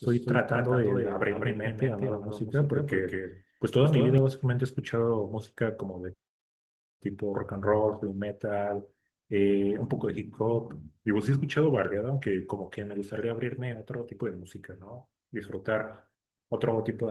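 From the start until 4.18 s, the speech is a doubled audio track. A second copy trails by about a fifth of a second, roughly 5 dB quieter, then cuts off abruptly. It is likely a second capture path.

From 10.40 to 12.76 s, a drift correction step slows playback by 5.39%. Pitch drops 96 cents, nearly a semitone, then snaps back. Clock-matching software likely adjusted its buffer.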